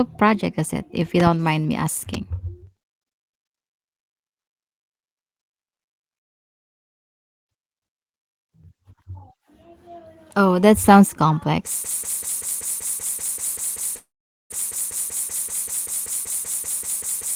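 Two loud pops arrive close together between 1.2 and 1.29 s, right after "is it if you" and before "mind me". A third loud pop lands at 2.14 to 2.17 s, following "mind me". Each peaks at about 10 dB above the speech and sits on top of it while the talking continues underneath. This is likely a voltage step or pulse entering the chain, such as a switch, plug or static discharge, which the downstream circuitry shapes into a sharp transient.

A long network dropout runs from 6.17 to 7.47 s. About 1.3 s of audio is missing, and the gap is heard as a brief fading tail followed by silence. Speech resumes further on, with the lost portion simply skipped. The likely cause is a stall in packet delivery long enough that the receiver's concealment gave out.

From 11.84 s to the end of the clip, a broken-record loop takes over. A 0.19 s fragment repeats exactly, back to back, and whatever should have followed is gone. 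This points to a player or stream that likely stalled and kept re-sending the last buffer it held.

Inside that loop, after "that sounds", a second long network dropout runs from 13.97 to 14.52 s. Roughly 0.54 s is lost, and most of that stretch is silent.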